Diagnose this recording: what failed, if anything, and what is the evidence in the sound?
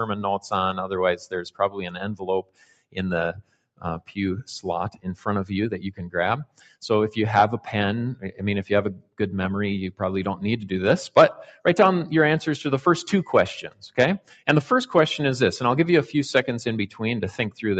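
A speech-tuned noise suppressor failed in the call processing stage. It stayed active on non-speech sound throughout. The level pumps and thins by about 10 dB as the suppressor mistakes sustained content for noise. Attacks pass while held parts sink.

The suppressor cut sound at 1.23–2.98, 3.32–4.13, 4.91–5.26, 6.45–6.76, 8.15–8.41, 8.94–9.20, 13.67–13.83 and 14.19–14.48 s. Drops reach about 13 to 18 dB. Sustained and decaying sound collapses there, and the tails are chopped short. The band also stops near 8 kHz.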